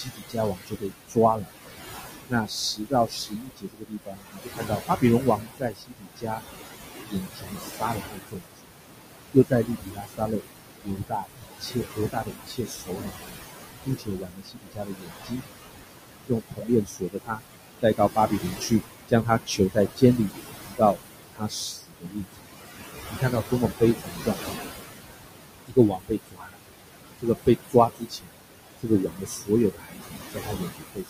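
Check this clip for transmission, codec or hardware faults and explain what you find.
The faults here come from a noise suppressor, not from the transmission path or the codec. The room noise itself, sitting about 8 dB below the speech, is simply part of the recording.

Noise suppressor artifacts run through the whole clip. The suppressor pulls down the bands it judges to be steady noise by about 19 dB, frame by frame. The background therefore sinks in the pauses and comes back up under the speech. Unlike codec artefacts, this pumping follows the speech-versus-pause pattern rather than staying fixed in character.

Speech cut by the noise suppressor appears from 0.03 to 24.56 s and again from 25.67 to 31.1 s. The first stretch has around ten seconds of affected sound in total, and the second has roughly three. The suppressor mistakes soft consonants, word endings and quieter passages for noise and turns them down along with the background, by up to about 22 dB. 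Those parts sound swallowed or faint. Unlike packet loss, nothing drops out abruptly or gets replaced. The quiet parts of the speech are dimmed.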